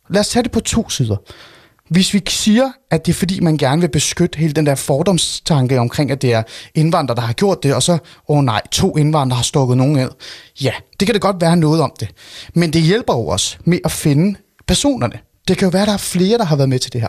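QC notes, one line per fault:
No faults to note.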